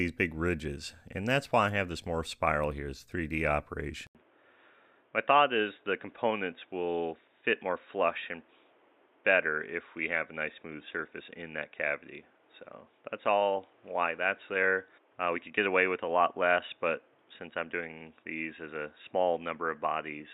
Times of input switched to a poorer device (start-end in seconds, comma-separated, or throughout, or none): 4.07-20.34